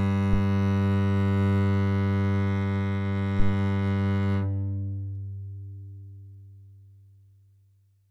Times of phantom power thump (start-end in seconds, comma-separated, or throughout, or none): 0.33-0.43, 3.39-3.55